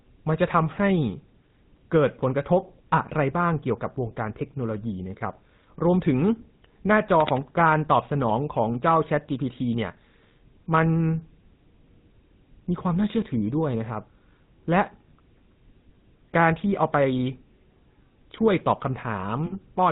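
Throughout, the speech has a plainly audible buzzy, gravelly roughness and nothing above 4 kHz, which fits the GSM full-rate codec at 13 kbps coding the vocal tract and excitation.

From 7.20 to 7.46 s, cable scratch noise adds dense, uneven scratching bursts about 10 dB below the speech, likely from a worn cable, connector or control being moved.

From 19.46 to 19.58 s, the sound is held as a rough, metallic ring for 60 ms. These are lost GSM frames, about three, each filled in by repeating the last good frame's settings.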